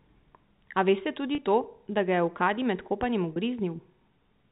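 Speech carried over a G.711 telephone path, with nothing above 4 kHz. Two brief dropouts show packet loss with pitch repetition. One runs from 1.35 to 1.38 s, just before "to da". The other runs from 3.33 to 3.36 s, right after "med kopanjem". Each lasts 30 ms, which fits a single lost packet. The receiver repeated the last pitch period to bridge each gap. So the sound briefly holds, with a slightly buzzy tone.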